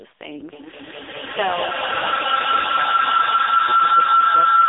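A speech clip carried over an AMR narrowband mobile codec for its whole length. The line band runs from about 300 Hz to 3.6 kHz with nothing above 3.8 kHz, and the heavy buzzy, synthetic coding damage points to one of AMR-NB's lowest-rate modes, around 5 kbps. From 0.53 s to the end, a feedback howl builds to about 8 dB above the speech. It settles near 1.5 kHz and pulses roughly every 200 ms. That pattern is the delay of an acoustic loop between two devices in one room on the same call, with the loop gaining level on each pass.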